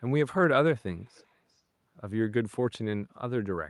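Echo leak, from 1.14 to 1.26 s: a faint, delayed copy of the speech, lagging by about 392 ms and sitting far below the voice, perhaps 35 dB down. Likely a loudspeaker's pickup slipped past the far side's echo canceller and was sent back.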